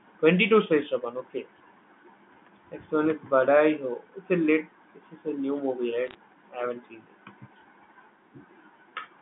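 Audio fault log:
6.07 to 6.15 s, bit errors on a digital phone line: bits flipped on the digital phone line over an error burst of a few bits per thousand, and each flipped bit corrupts a single sample. Flips on high-order bits, or on the sign of loud samples, throw those samples far off, so the stretch just before "I haven't seen" crackles with sharp ticks, pointing to a handful of frames hit. The narrow 150 Hz to 3.5 kHz telephone band continues unchanged under the clicks.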